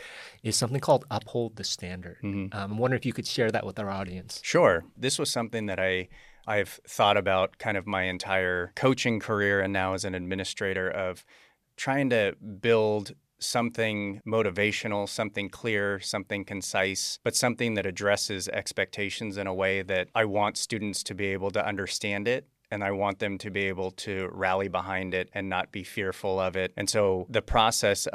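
A speech recording with no technical faults to report anywhere in the signal.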